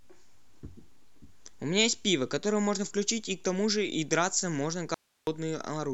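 At 4.94 s the speech cuts out abruptly and returns at 5.27 s, an audio dropout to a faint residue lasting about 330 ms. Only hiss, roughly 45 dB below the speech, fills the gap, likely from a brief signal loss while the path stayed live. The hard edges distinguish it from a pause or fade.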